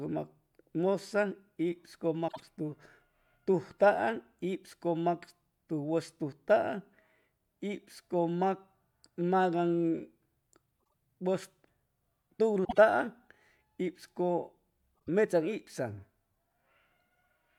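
Frames out of order at 2.28–2.41, 10.82–10.93, 12.65–12.78 and 14.96–15.09 s: adjacent runs of two frames were decoded swapped, so the speech flutters. Spectrograms show formant tracks breaking and jumping at vertical seams.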